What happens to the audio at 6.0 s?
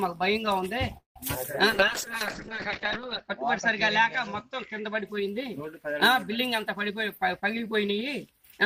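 Nothing goes wrong at 6.0 s: the audio carries on intact through that moment with no fault to be heard.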